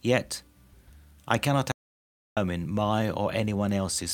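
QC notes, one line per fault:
1.72–2.37 s, audio dropout to silence: after "I cannot" the speech cuts to dead silence with no room tone for 0.65 s, likely lost input while recording continued.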